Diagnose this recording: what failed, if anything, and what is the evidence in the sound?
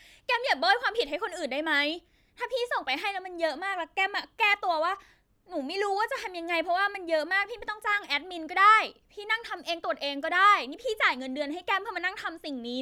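Nothing in the speech stood out as a fault on listening, and no stage of the chain gave any audible sign of trouble.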